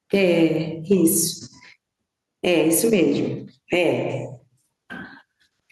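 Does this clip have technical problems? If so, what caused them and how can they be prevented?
Yes. Gain pumping runs throughout the speech, with the level swinging by around 10 dB. The likely cause is input gain set far too high, so a fast limiter or compressor keeps clamping down on every peak and releasing in the gaps, squashing loud and quiet passages together. Preventing it means lowering the microphone gain to leave headroom and easing the limiter's threshold and release.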